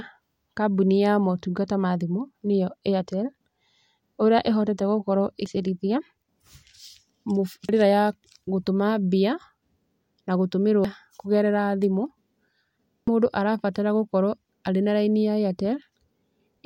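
Damaged data in a compressed stream produces brief glitches at 5.46 s, 7.69 s (just before "ya gũtũma"), 10.85 s (before "kũgerera thimũ") and 13.08 s (before "mũndũ arabatara"). At each, corrupted bytes make the decoder misread frames and lose sync until it finds the next header.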